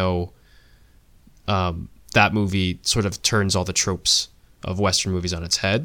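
No technical faults are audible anywhere in this speech recording.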